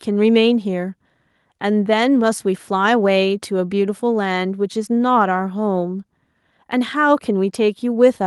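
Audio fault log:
Nothing to log here, as the speech comes across without any audible technical fault.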